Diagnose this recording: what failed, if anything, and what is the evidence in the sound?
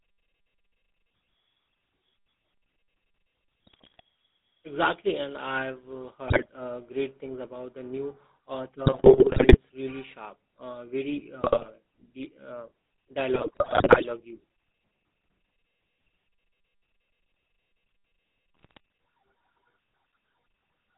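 GSM full-rate codec throughout, at the codec stage. The whole clip sits between about 200 Hz and 3.7 kHz with a buzzy, gravelly roughness. That fits a 13 kbps GSM full-rate coder, where sparse, regularly spaced pulses drive a vocal-tract filter instead of the real excitation.

GSM bit errors on the radio link at 3.67–4.00 s, 6.28–6.51 s (after "and I've uh"), 8.86–9.58 s, 11.42–11.73 s (after "really sharp uh very"), 13.34–14.05 s and 18.54–18.78 s. Squawks, pops and gargling appear where corrupted filter, pitch and gain values reach the decoder.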